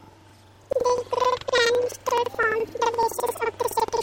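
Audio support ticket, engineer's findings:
Planar audio read as interleaved, throughout. Speech an octave high with an 11.7 Hz flutter; each block of about 85.3 ms (fits 4096-sample planar buffers) plays left then right at double speed. Probable component: deinterleave/format conversion stage.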